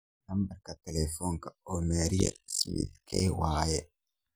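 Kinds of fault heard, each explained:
Overlap-add ripple: the speech was chopped into windowed frames and rejoined with overlaps that don't add back to a steady gain, so the level pumps, here by about 60 dB, around 50 times a second, giving a harsh robotic flutter from 2.20 to 3.22 s.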